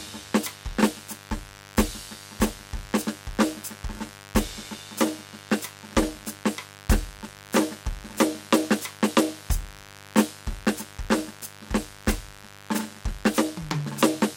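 From the first second to the end, there's a mains buzz sitting under the music, about 20 dB down. Switching spikes from the 50 Hz supply leak in twice per cycle, stacking harmonics up into the kilohertz range, so you get a steady, raspy buzz.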